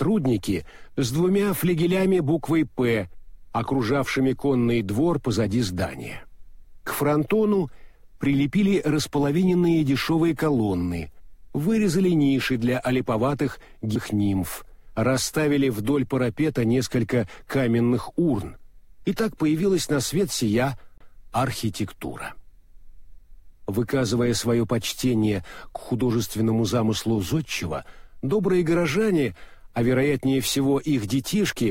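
A CD skip occurs at 20.98 to 21.01 s: the laser lost its track and landed on a different turn of the disc's spiral, so playback mutes for roughly 30 ms, then resumes abruptly from another point in the sound.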